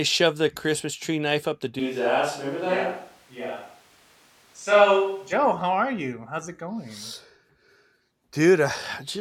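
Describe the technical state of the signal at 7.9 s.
At 7.9 s the speech signal is intact, with no technical fault at that moment.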